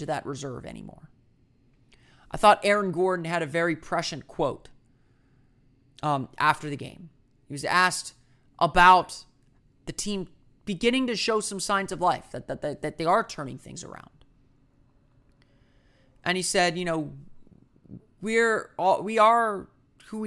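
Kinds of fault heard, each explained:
No faults detected in the speech; nothing to report.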